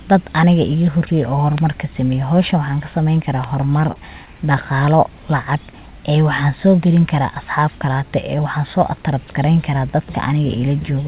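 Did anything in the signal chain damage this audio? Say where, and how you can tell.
Yes. Two loud pops sit on top of the speech, one from 1.58 to 1.60 s and another from 3.44 to 3.46 s. Each is a single sharp transient, roughly 10 dB above the speech level, and the speech continues unbroken beneath it. This is likely an analogue-side event such as a plug, switch contact or static discharge putting a voltage step into the line, which the downstream circuitry shapes into a brief thump.

The second fault is repeated stalls (stutter) at the network and jitter-buffer stage of the call, which passes through G.711 A-law with nothing above 4 kHz. Between 3.78 and 4.40 s the audio hesitates four times. About 63 ms in total is filled, with the longest gap 36 ms and roughly a tenth of that span concealed. Packets arrived late, the buffer drained, and the receiver stretched the last sound each time. 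Nothing is lost, but the speech drags.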